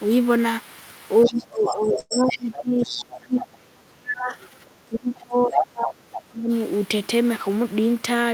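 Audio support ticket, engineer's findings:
Other side's voice leaking through at 1.25–2.38 s, 2.79–3.47 s, 5.16–5.63 s and 6.12–6.21 s. Second voice about 10 dB under the talker, equal level at 5.16 s, about 15 dB under at 6.12 s. Likely incomplete echo cancellation of loudspeaker playback. Spectrogram: a second, separate harmonic stack under the main one.

Speech suppressed in double talk, 1.26–4.37 s and 4.89–6.50 s, about three seconds and one and a half seconds affected. Talker dips by up to about 30 dB, then about 25 dB. Likely echo canceller attenuating both sides during overlap. Waveform: envelope pumps and collapses in chunks; spectrogram loses upper harmonics.

Call audio freeze at 1.99–2.13 s. The last sound is stretched into a fading buzz, with about 20 ms of near-silence, 113 ms inserted in total, nothing lost, and the delay grows by 113 ms. Likely jitter buffer underrun from delayed packets. 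Spectrogram: flat, smeared horizontal bands instead of moving formants.

Jitter buffer speed-up, 7.49–8.30 s. Playback runs at 110% with pitch unchanged, roughly 100 ms removed. Receiver dropping pitch-period segments to drain excess buffer. Sounds hurried. Waveform: periods visibly skipped at splice points; spectrogram compressed in time, harmonic spacing unchanged.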